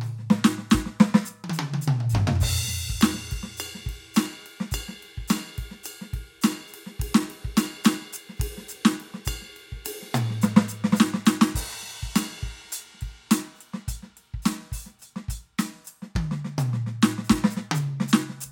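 Listening to this music, nothing stood out as a technical problem.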